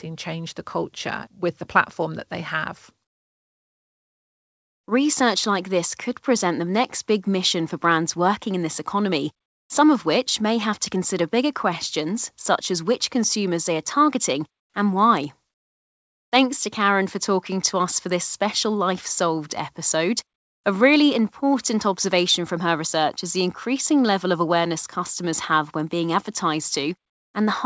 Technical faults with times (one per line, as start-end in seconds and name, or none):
14.60-14.74 comfort noise in place of the background